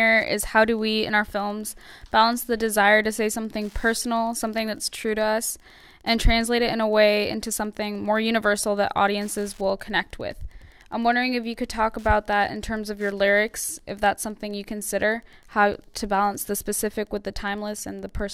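A nearby Wi-Fi radio's 102.4 ms beacon is rectified by the audio circuit throughout, producing Wi-Fi interference: a steady, faint ticking about ten times a second, roughly 40 dB below the sound.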